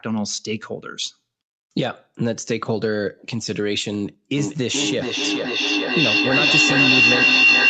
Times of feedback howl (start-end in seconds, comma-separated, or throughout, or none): 4.37-7.69